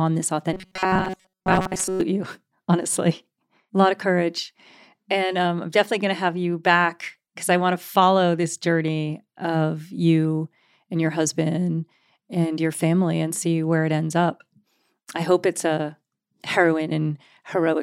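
From about 0.53 s to 2.01 s the speech goes robotic: a rigid, metallic buzz pinned at 188 Hz that still loosely tracks the words. It's likely robotic sound from repeated short buffers. Fresh audio wasn't arriving in time, so a tiny chunk of roughly 5.3 ms kept getting replayed. That repeat rate is what sets the 188 Hz pitch. Most of the real audio in that stretch gets skipped, which is why it sounds so mechanical.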